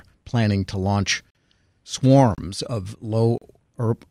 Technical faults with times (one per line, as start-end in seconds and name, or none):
1.30-1.35 gap between stream segments
2.35-2.38 gap between stream segments
3.38-3.42 gap between stream segments